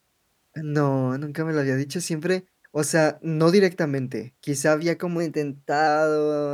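A speech clip. Just after "directamente quizá había como", from 5.19 to 5.87 s, the sound speeds up by 5.6% and rises about 95 cents, nearly a semitone. Then it snaps back. This is a drift correction step. Clock-matching software likely jumped the playback rate to rebalance its buffer.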